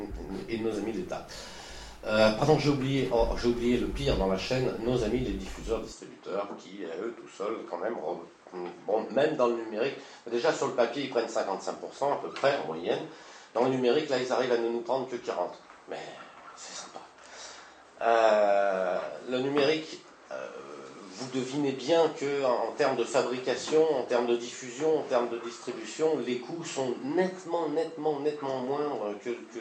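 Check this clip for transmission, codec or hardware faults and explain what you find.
One fault is present. From 5.92 s to the end, the sound abruptly turns duller, with nothing above 8.4 kHz. It drops by roughly 5 dB, with no gap, and gains a faint new noise floor. This is likely an input switched to a poorer device with a narrower band.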